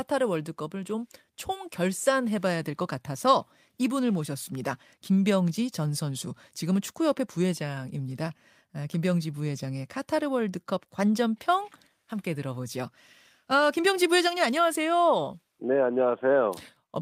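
No technical faults can be heard in this recording.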